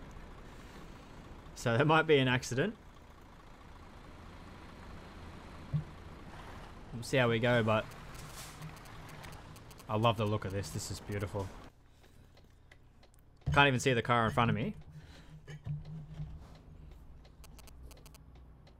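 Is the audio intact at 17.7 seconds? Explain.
No. From 17.44 to 18.16 s a galloping dit-dit-dit of short 217 Hz buzzes sits roughly 20 dB below the sound. These are GSM signalling bursts: a nearby 2G phone's radio pulses, rectified by the audio circuitry.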